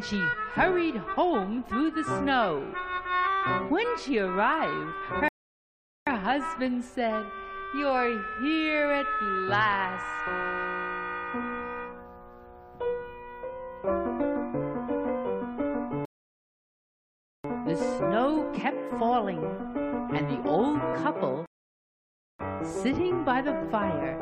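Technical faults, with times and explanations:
5.28–6.07 s, 16.05–17.44 s and 21.46–22.39 s, rebuffering stall: the player exhausted its downloaded audio and paused until more arrived, so the sound drops to silence for 0.78, 1.39 and 0.93 s, then resumes exactly where it stopped, adding time without losing any audio.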